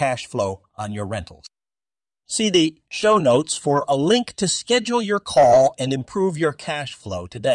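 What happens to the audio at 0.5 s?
Nothing goes wrong at 0.5 s; the speech runs on intact there, with no dropout, click, distortion or other audible fault at that moment.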